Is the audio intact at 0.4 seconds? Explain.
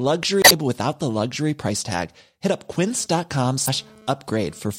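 No. From about 0.41 to 0.52 s the speech breaks into a short glitch, a chirp, squawk, click or brief hole. This is damaged data in a compressed stream: corrupted bytes make the decoder misread those frames, lose sync and hunt for the next valid frame header.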